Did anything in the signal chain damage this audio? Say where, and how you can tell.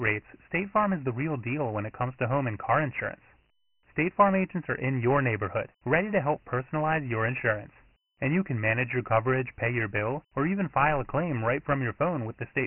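Yes, at the codec stage. Across the whole speech clip the voice is muffled and boxed in, with nothing above 3 kHz, and a gritty, granular hiss rises and falls with the speech rather than sitting steady underneath it. That pattern is heavy Dialogic VOX ADPCM damage. Each sample is coded as a 4-bit step from a predicted value, so the quantisation error tracks the signal's level. A 3 kHz ceiling points to a 6,000-sample-a-second stream at about 24 kbps.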